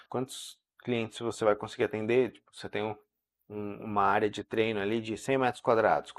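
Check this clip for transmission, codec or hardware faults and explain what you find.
The speech carries one fault, present throughout. It sounds dull and muffled, with a gurgling, granular roughness on every phrase. The likely cause is MP2 compression at a low rate, around 80 kbps: upper sub-bands starved of bits switch off and flicker, while the remaining bands are coarsely quantised.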